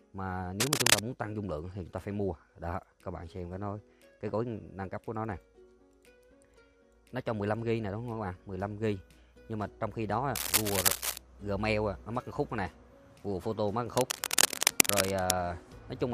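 Three bursts of cable scratch noise come in, at 0.6 to 1.0 s, 10.35 to 11.18 s, and 13.97 to 15.32 s. Each is a dense, ragged rustle sitting a bit louder than the audio itself, likely a worn cable or connector being moved.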